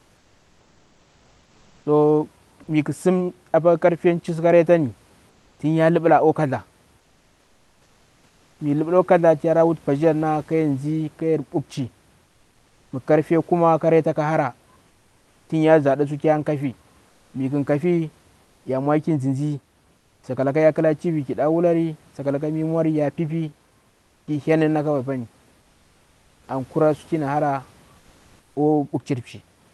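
During the pauses at 0.0–1.85 s, 5.29–8.59 s, 12.25–20.23 s (ending just before "sakalaka ya kla tv") and 23.89–28.55 s (starting just after "sakalaka tsuwa ya piipii"), roughly 1.8 to 2 s of the room background is replaced by comfort noise. This is likely Opus discontinuous transmission standing in synthetic hiss for the real room sound. It sounds flat and featureless. In the first pause it is about 2 dB quieter, with the background about 40 dB below the loud parts. On a spectrogram the patches show as smooth, uniform grey texture without the real background's fine flicker, stopping at the codec's 12 kHz ceiling. On a waveform they show as an even noise floor.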